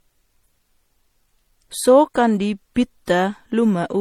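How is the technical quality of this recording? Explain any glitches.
The speech is audibly degraded throughout, with layered compression artefacts rather than isolated glitches. Transcoding between lossy codecs, throughout: an MP3 stage followed by HE-AAC likely re-encoded earlier artefacts, giving a dull top end, swirly smearing and a grainy edge, consistent with low bitrates.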